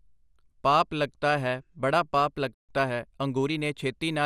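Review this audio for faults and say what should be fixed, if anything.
Throughout the clip the speech sounds dull and carries a gurgling, granular roughness, with nothing present above about 15.1 kHz. This is likely MP2 compression. Layer II divides the spectrum into 32 sub-bands and shares out a limited bit budget, so the top bands are dropped and the rest are coarsely quantised and flicker. The damage is plainly audible and points to a rate around 80 kbps. Encode at a higher bitrate or with a more efficient codec to prevent it.

At 2.54 s the speech stops abruptly in mid-flow and stays silent for about 0.14 s, until 2.69 s. The likely cause is a playback stall: the player ran short of buffered data, or its audio thread was blocked, so it had nothing to send to the output until it recovered. A larger playback buffer and a higher-priority audio thread would prevent it.

From 2.69 s to 3.63 s, right after the gap, the speech runs hurried, about 1.15 times normal speed, while keeping its normal pitch. 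This is time-compressed catch-up. The player works through the backlog left by the stall by cutting out small slices of audio and cross-fading across the joins, which shortens the material without shifting pitch. Avoiding the stall in the first place would remove the need for catch-up.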